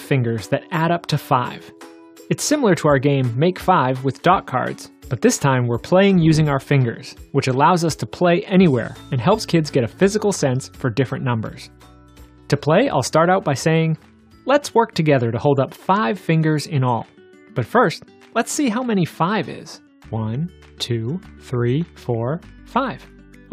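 No technical faults are audible.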